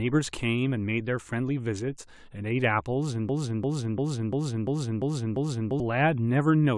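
At 3.29 s the speech catches on a fragment about 0.35 s long and replays it exactly, back to back, seven times until 5.8 s, a classic broken-record loop. Whatever should have been heard during those two and a half seconds never arrives; the sound simply resumes afterward with that stretch missing. The likely cause is a stall in the player, encoder or stream, which kept resending the last buffered chunk while waiting for fresh audio.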